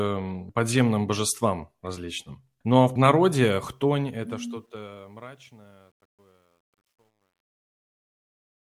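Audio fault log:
3.46–8.64 s, truncation distortion on a fade: after "а в" the speech fades out, but the fading stage keeps too few bits and adds no dither, which fits roughly 11-bit resolution. From 5.16 s the waveform collapses into coarse steps, so the tail sounds gritty.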